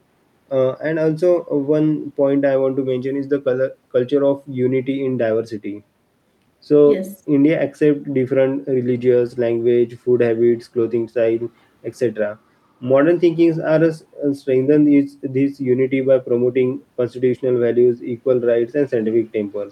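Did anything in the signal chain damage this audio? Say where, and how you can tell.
No, nothing in the signal chain stood out as damaging this audio on listening.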